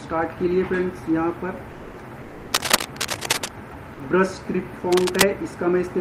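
From 2.53 to 3.49 s a dense, uneven scratching and rustling sits on top of the audio at roughly the same loudness as the sound itself. This is cable scratch noise, likely from a worn cable, connector or control being moved so that its contact resistance jumps about rapidly, throwing irregular bursts of noise into the signal for as long as the contact is disturbed.

At 3.69 s the sound briefly gives way to a flat patch of comfort noise, about 20 ms long, in which roughly 10 ms of the actual audio goes missing before it returns. This is sound dropped by the voice detector. The sender's detector has likely judged a quiet stretch to be background and stopped transmitting, and the receiver has filled the gap with synthetic noise. This behaviour points to discontinuous transmission in a codec such as Opus.

From 4.91 to 5.25 s the same cable scratch noise returns. It is shorter this time, sitting somewhat above the level of the sound, with the same crackly, rustling texture, likely of an unstable contact being jostled.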